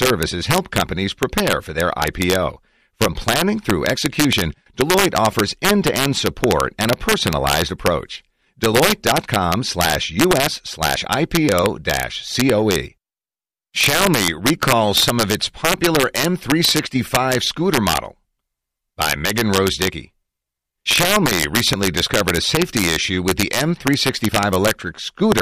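A speech recording with integer overflow throughout. The level is pushed about 4 dB past full scale. A small fraction of samples, under half a percent, exceed the limit and wrap to the opposite sign. Each loud peak therefore snaps into a harsh crack, far sharper than clipping.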